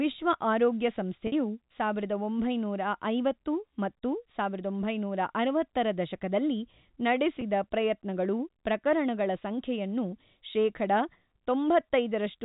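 At 1.27 to 1.32 s, after "ವಿಶ್ವ ಆರೋಗ್ಯ", packet loss with pitch repetition holds the last pitch period for 50 ms, likely five 10 ms packets, giving a brief buzzy sustain. At 7.41 s, before "ಪ್ರಯತ್ನಗಳು ಪ್ರಕರಣಗಳ ಸಂಖ್ಯೆಯನ್ನು ಶೇಖಡ", a 10 ms gap is bridged the same way under the band-limited telephone sound.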